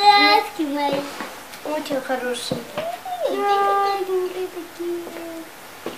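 Nothing here needs flagging; there isn't a single technical fault to point to anywhere in the clip.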